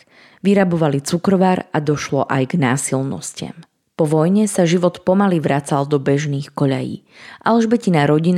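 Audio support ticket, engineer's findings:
No faults found in recording.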